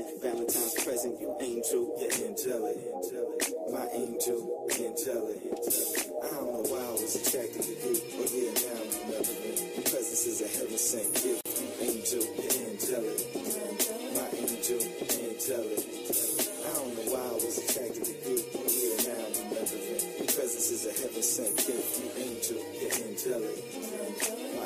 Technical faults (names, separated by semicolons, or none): gap at a join of encoded pieces